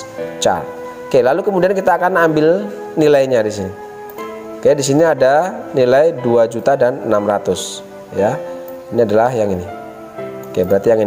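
Throughout, the level pumps with a gain swing of around 10 dB, so loud and quiet passages sit unnaturally close in level and the audio sounds squashed and breathing. This gain pumping is likely caused by the input gain being set far too high for the microphone, with a fast limiter or compressor repeatedly clamping the level on each peak.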